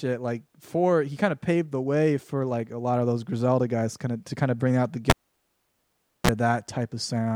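Speech with a cable pulled and plugged in from 5.10 to 6.31 s, after "of bring out the": a pop, 1.16 s of near silence, 42 ms of 60 Hz mains buzz as the tip touched, then another pop. A waveform shows spikes around a flat gap. A spectrogram shows vertical broadband lines and brief harmonic stripes.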